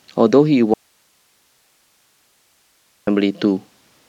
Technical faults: audio dropout to a faint residue

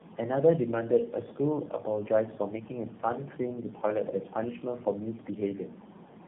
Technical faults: tandem speech coding

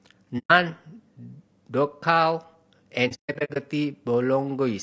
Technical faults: low-delay AAC compression; AAC frame loss with muting

